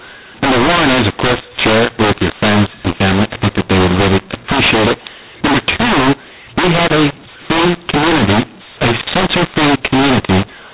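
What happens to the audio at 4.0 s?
At 4.0 s the sound is caught in a mu-law and A-law mix-up that runs through the whole clip: the speech was coded with G.711 A-law but decoded as mu-law. Because the two laws map their 8-bit codes to different levels, amplitudes come out scrambled, some too loud and some too soft, and near-silent samples are pushed well above zero. The speech at this point sounds harsh and distorted, with gaps filled by noise, all within the narrow telephone band below 4 kHz.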